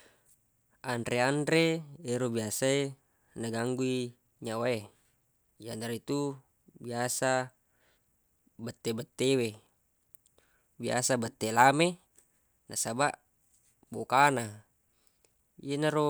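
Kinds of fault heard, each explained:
No kinds of fault are heard in this speech recording.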